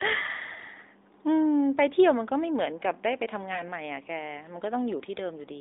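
A speech clip carried over a narrowband mobile line, with nothing above about 3.7 kHz. At 3.54 to 3.62 s there is one lost AMR speech frame. The decoder patches the missing 20 ms by reusing the previous pitch and vocal tract settings at lower gain. That gives a brief dip or warble before the voice returns, weak or rough for a moment.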